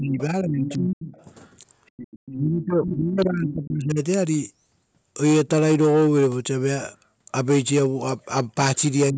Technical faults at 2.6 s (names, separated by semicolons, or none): other side's voice leaking through; speech suppressed in double talk